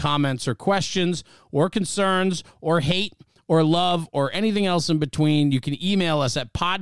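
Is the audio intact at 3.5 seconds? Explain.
Yes, at 3.5 seconds the speech plays through without any dropout, click, distortion or other fault.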